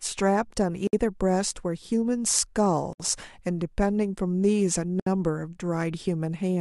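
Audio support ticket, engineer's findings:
Gap at a join of encoded pieces: silences at 0.87–0.93 s (59 ms), 2.93–3.00 s and 5.00–5.06 s (about 67 ms each), recurring every 2.0 s. Separately encoded segments joined untrimmed, so encoder delay and end padding remain. Unlike random packet dropouts, the regular spacing is the tell, and sound resumes exactly where it stopped.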